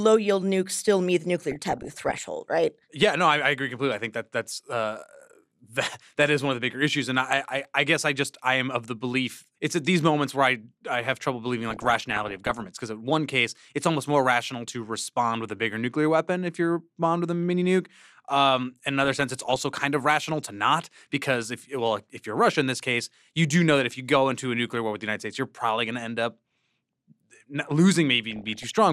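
Weak reception let bit errors slip past DAB error correction, corrupting MP2 sub-band data: DAB burbling, heard as short noise blips over the speech at 1.50 to 2.26 s after "nukes still meet the", 11.70 to 12.67 s between "I have trouble believing" and "because in one case", 19.04 to 19.69 s before "kind of rational to", and 28.31 to 28.73 s.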